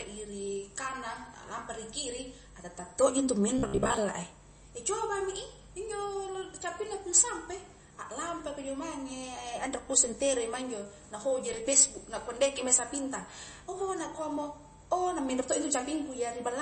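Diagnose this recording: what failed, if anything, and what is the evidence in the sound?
Across the whole speech clip the sound is watery and swirly, with smeared consonant attacks. The codec stage is the likely culprit: MP3 compression starved of bits, pointing to a low bitrate around 32 kbps. The encoder has chopped off the treble at a fixed cutoff and keeps dropping weak frequency lines in and out between frames. That on-off flicker is the swirl, and the missing top end dulls the s sounds.

From 3.58 to 3.97 s the voice turns into a rigid, metallic buzz at 66.7 Hz that still loosely tracks the speech. This is robotic sound from repeated short buffers, likely at the driver or buffer stage. Fresh audio arrived too late, so the system replayed the last chunk, with roughly half the stretch made of repeats while real audio was skipped. A 66.7 Hz buzz means a 15 ms repeat period, which fits a buffer of about that length.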